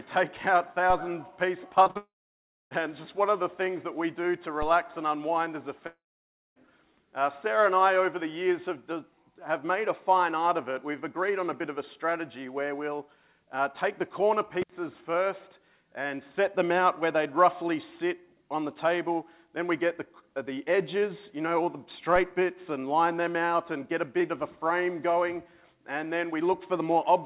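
At 0.90 s a DC step shifts the waveform's zero line. It is heard as a low thump. The offset then drains away rather than holding, as a very low high-pass near 5 Hz would let it.

From 1.84 s to 1.97 s, three short concealed packet losses follow one another. The receiver patches gaps of 17, 12 and 41 ms by extending the preceding sound. The result is a quick smear and wobble.

At 1.97 s a long network dropout begins. The likely cause is a stall in delivery. The filled sound fades into about 630 ms of silence. The audio returns at 2.73 s with that stretch missing.

A second DC step at 4.62 s gives the same brief thump.

Another long network dropout runs from 5.87 s to 6.68 s. Again, likely a delivery stall. Concealment fades into about 590 ms of silence before the audio resumes. Throughout, nothing sits above 4 kHz, which fits a G.711 mu-law call path at 64 kbps.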